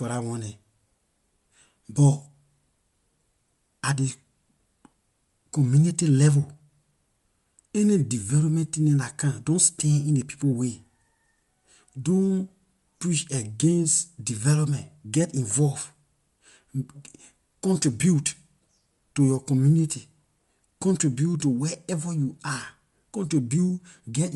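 Bluetooth LC3 compression runs throughout the speech, and the band stops dead at 11.5 kHz with nothing above it. The damage is plainly audible, and it likely comes from an LC3 encode. That transform codec cuts the signal into short frames, which here fits 10 ms frames. It converts each frame to frequency bins and quantises them coarsely to fit the bitrate, which fits about 48 kbps. The result leaves the voice with a processed, grainy edge.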